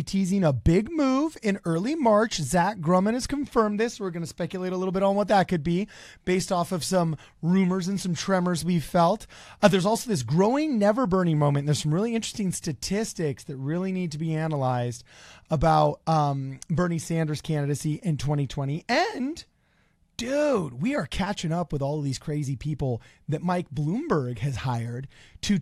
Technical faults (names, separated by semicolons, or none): none